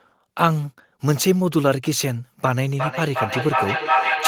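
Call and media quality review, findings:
Feedback echo between two devices, 2.45 s to end of clip. Speech returns at roughly 0.4 s intervals, thinner and ringing. Repeats build to about 2 dB above the speech. Second device in the room replays the call; its echo canceller doesn't cover this loop.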